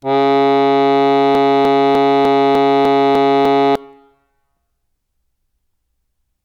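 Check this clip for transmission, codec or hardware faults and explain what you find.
The music has one fault, a broken-record loop. From 1.35 s to 3.76 s, a fragment of about 300 ms repeats exactly, back to back, eight times, so a short phrase stutters mechanically and the music that should have filled those 2.4 seconds never arrives. The likely cause is a player, encoder or stream stalling and re-sending the last buffer it held. On a waveform the stretch shows identical 300 ms blocks; a spectrogram shows the same pattern tiled at a fixed interval.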